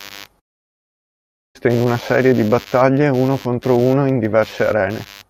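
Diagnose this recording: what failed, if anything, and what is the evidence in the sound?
From 0.39 to 1.57 s speech fades into buzz or hiss, then silence, and resumes with material lost: likely a long network dropout, outlasting brief concealment.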